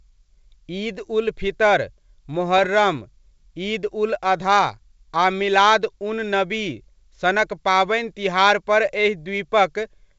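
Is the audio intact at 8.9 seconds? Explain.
Yes, the audio is intact at 8.9 seconds, with the speech passing through G.722 wideband telephone coding at 64 kbit/s and no fault present at that point.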